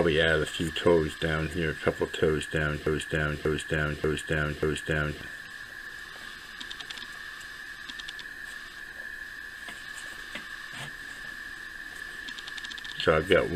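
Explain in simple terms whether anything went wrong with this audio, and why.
From about 2.87 s to 5.21 s the audio gets stuck in a broken-record loop: the same 0.59-second snippet plays four times in a row. Most likely the player or stream stalled and kept replaying its last chunk, so whatever should have played there is simply gone.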